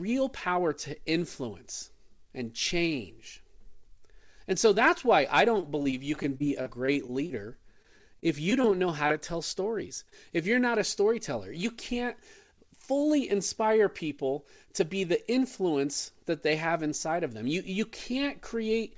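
Speech heard through a call path whose spectrogram stops at 8 kHz, consistent with G.722 at 64 kbps, shows two kinds of packet-loss fault. Repeated packet loss (robotic sound) starts after "so that's why I" and runs 5.58–7.33 s, with 13 gaps up to 37 ms long. It recurs at 7.82–8.66 s, with 5 gaps up to 24 ms. Each hole is patched by extending the previous sound, so the sound turns choppy, and the spectrogram shows smeared, repeated harmonic slices. Short concealed packet loss appears twice. The first is at 9.08–9.12 s, between "know how" and "to tell stories". The second is at 10.10–10.14 s, right after "how to tell stories". Each time about 20 ms went missing and was filled in, leaving a brief smear.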